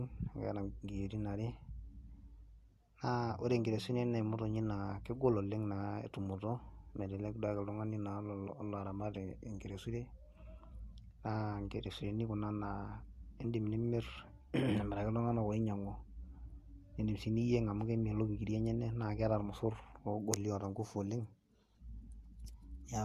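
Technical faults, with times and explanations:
throughout, transcoding between lossy codecs: the speech was likely encoded by one lossy codec, then re-encoded by another, which fits Vorbis followed by AAC-LC. The second stage wastes bits on the first's artefacts, so two kinds of smearing overlap above a dulled top end.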